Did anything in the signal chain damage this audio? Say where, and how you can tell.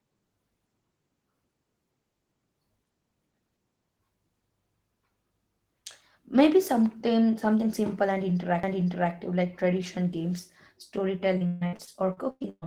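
Yes. CD skips at playback, with ticks at 3.33 s and 8.63 s, the second between "something something simple" and "like tradition games". The laser jumped tracks, muting for a few milliseconds.

Repeated packet loss from about 11.37 s to the end: choppy, robotic sound as the network kept dropping packets and concealment stretched the last fragment.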